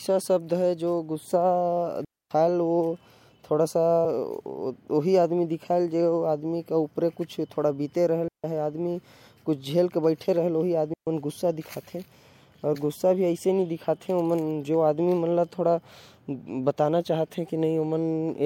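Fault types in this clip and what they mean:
Digital wireless dropout: the radio link between transmitter and receiver loses too much of its data stream, so the receiver mutes the output with a very quick fade rather than passing corrupted audio. In this speech clip it happens three times, at 2.05–2.31 s (about 260 ms), 8.28–8.44 s (about 160 ms) and 10.94–11.07 s (about 140 ms). Each is a clean gap of near silence, with no noise burst at either edge.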